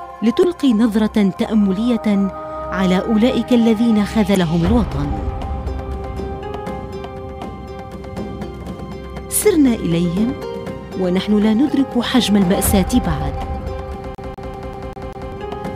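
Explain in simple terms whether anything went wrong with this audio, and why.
Three brief glitches at about 0.43, 4.35 and 11.69 s are damaged data in a compressed stream. Part of the compressed file was corrupted, so the decoder briefly lost its place and produced a tiny chirp or blip. Each is a single isolated event that never repeats.

From 14.15 to 15.32 s the audio does something different: a CD stuck on one turn. A scratch keeps throwing the player back, so the same slice of about 0.2 s (196 ms) plays six times in a fast, even stutter with a short mute at each jump. The regular repetition is what sets it apart from the one-off blips.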